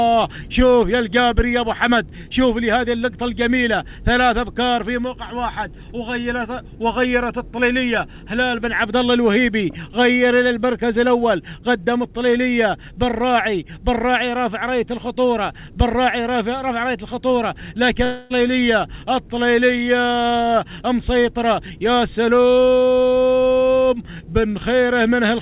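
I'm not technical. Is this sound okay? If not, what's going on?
No. Between 18.04 and 18.32 s there's a long network dropout: the connection likely stopped delivering sound, so the receiver filled the gap with a smeared buzz, and that moment is lost.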